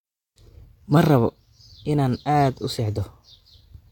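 No audible technical faults.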